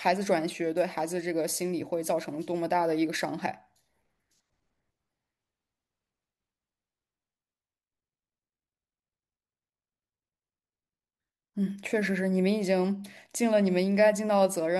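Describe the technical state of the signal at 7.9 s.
Around 7.9 s the speech signal is intact, with no fault heard at that moment.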